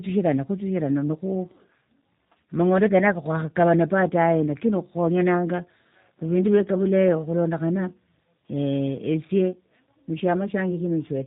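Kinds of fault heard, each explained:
Tandem speech coding: The speech sounds rough, muffled and warbly, with nothing above about 3.8 kHz. This fits two speech coders in a row, such as G.726 then G.729A, each re-coding the previous one's degraded output so the damage compounds.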